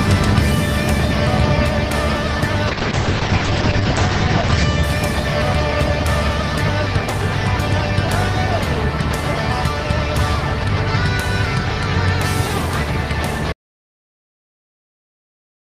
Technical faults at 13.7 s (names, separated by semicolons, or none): audio dropout to silence